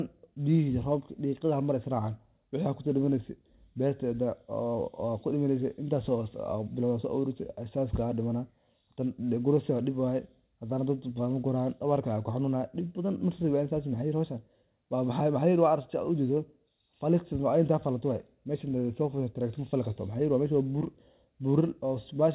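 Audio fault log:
No faults heard anywhere in this telephone-band speech.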